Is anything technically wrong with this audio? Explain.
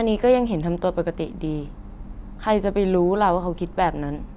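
No, nothing in this speech clip stood out as technically wrong on listening.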